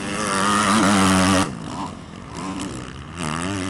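At 2.51 to 2.55 s there is a short concealed packet loss: about 20 ms of audio never arrived, and the receiver filled the gap by extending the preceding sound before blending back. Unlike a true dropout, there's no silence, only a brief smear or wobble.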